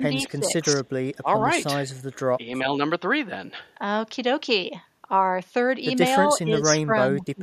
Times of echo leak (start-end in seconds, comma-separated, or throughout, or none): 0.85-0.89, 2.13-2.19